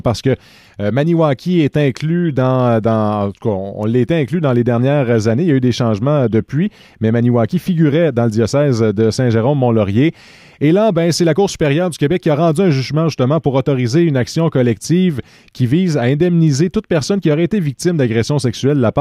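No technical faults are audible.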